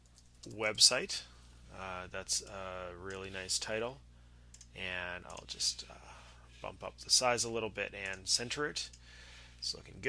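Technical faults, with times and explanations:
Nothing in this one stands out as a technical problem; it all sounds fine to me.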